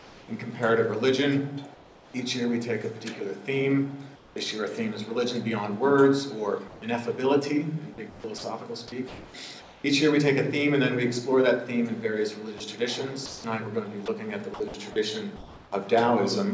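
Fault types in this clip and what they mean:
Comfort noise in place of the background: In the pauses, the real background, already about 23 to 27 dB below the loudest parts, gives way to a steady, featureless hiss about 1 to 4 dB quieter, likely from discontinuous transmission. Only background is replaced; no sound goes missing.
Sound dropped by the voice detector: At 8.38 s, 60 ms of actual sound vanishes under the same steady noise, likely because the sender's detector mistook it for background. Unlike plain comfort noise, something audible is lost here, in one single gap.
Sound chopped by the voice detector: From 12.58 to 15.72 s the sending likely switches on and off repeatedly, replacing about 700 ms of sound. The sound has two or more holes, sounding choppy rather than like one clean dropout.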